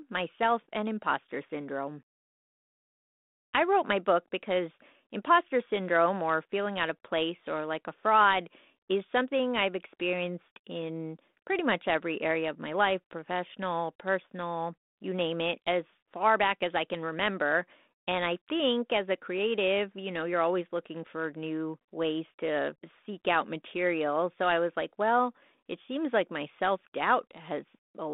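There are no technical faults to describe in this speech recording.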